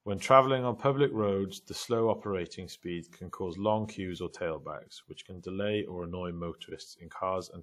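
Throughout the speech, plainly audible codec damage points most likely to WMA compression, at a rate that fits about 48 kbps. Quantisation noise from the transform coder smears around the sound as a ringing, washy hiss, and a spectrogram shows nothing above 18.2 kHz.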